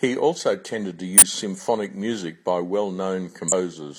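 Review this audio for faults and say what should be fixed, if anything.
Compressed frames get skipped twice, around 1.13 to 1.23 s (roughly 40 ms lost) and 3.48 to 3.52 s (about 150 ms). Whole frames never play, so the speech jumps ahead. Check file integrity and the decoder's error handling.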